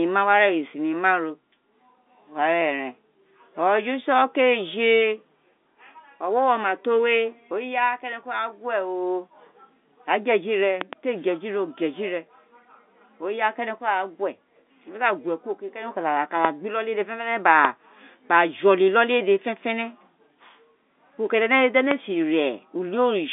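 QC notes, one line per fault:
10.81–10.95 s, loud pop: a pair of sharp pops in quick succession, peaking about 15 dB above the speech, which carries on underneath. A likely voltage step from a plug, switch, static or driver glitch is shaped by the downstream circuitry into brief thumps.
16.45 s, 17.65 s and 21.91 s, loud pop: single short pops, each peaking about 20 dB over the speech and lasting about 20 ms. Each is likely a transient electrical pulse entering the signal chain, heard as a click laid over continuing speech.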